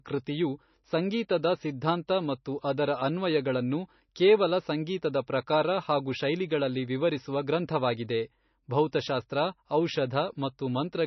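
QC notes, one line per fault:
Throughout, MP3 compression: the encoder appears starved of bits, likely a low-bitrate MP3 at around 27 kbps, so it discards everything above 6 kHz and zeroes weak frequency lines frame by frame, leaving the speech dull, watery and swirly, with s sounds chirping and consonant onsets smeared.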